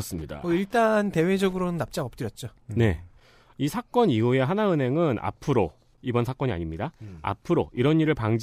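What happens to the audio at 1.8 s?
At 1.8 s the speech carries Wi-Fi interference, which runs from 0.0 to 2.0 s. A nearby Wi-Fi radio's beacon, repeating every 102.4 ms, is rectified by the audio circuit. The result is a faint, steady ticking about ten times a second, sitting well below the speech.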